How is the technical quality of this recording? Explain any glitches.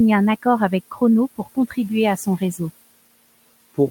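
One glitch stands out. Room noise sits about 21 dB below the speech. Between 1.38 and 1.76 s, the noise suppressor cut speech, mistaking soft parts for background. They dropped by up to about 16 dB, around 150 ms in total, and sound swallowed.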